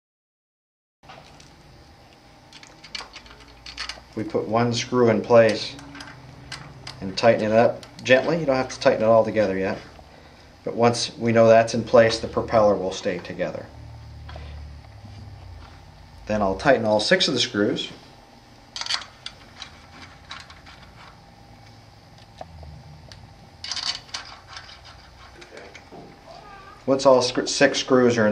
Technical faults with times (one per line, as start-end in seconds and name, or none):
none